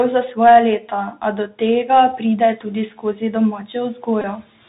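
Speech coded through the Bluetooth CVSD headset codec throughout, a 64 kbps one-bit delta stream that cuts everything above 4 kHz and leaves sibilants scratchy over a granular hiss. The background room noise rises by about 14 dB near 2.5 s. Speech is then cut by the noise suppressor at 2.98–3.34 s and 3.95–4.08 s. Each time, roughly a tenth of a second of quieter speech is pulled down with the noise, by up to about 9 dB and 10 dB, so it sounds swallowed. A Bluetooth headset packet repeated at 4.22–4.25 s produces a short buzz near 267 Hz, which points to about 22.5 ms of lost packets being replaced by the last good one.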